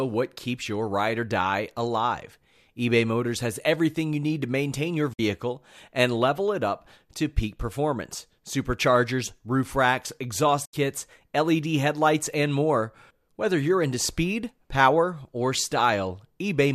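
At 5.13 s, right after "need to maintain your", the speech drops out for about 60 ms. A short fade of about 8 ms leads into silence. This is a digital broadcast dropout. The receiver lost good frames and muted until valid ones returned, and roughly 48 ms of sound is gone. A second, longer hole comes at 10.65 s, after "performance superchargers roof racks", lasting about 90 ms. About 72 ms is lost there, which fits three missing frames.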